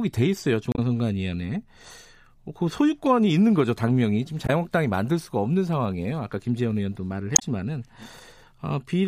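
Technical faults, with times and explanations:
0.72–0.79 s, 4.46–4.50 s and 7.33–7.43 s: damaged data in a compressed stream. Corrupted bytes make the decoder misread or drop frames and resync at the next header. The result is a brief disruption in the speech, seen as a broken, smeared or empty vertical strip on the spectrogram and a discontinuity in the waveform.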